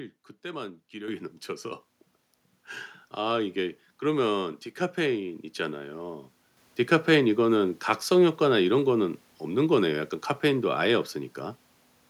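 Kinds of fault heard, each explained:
Microphone volume stepped up: the input gain on the capture device is raised abruptly in a single step, so everything the microphone picks up, voice and background alike, becomes louder at the same instant. In this speech clip it happens twice, at 1.08 s with a rise of about 8 dB and again at 6.57 s with a further rise of about 6 dB, each heard as a sudden level jump that then holds.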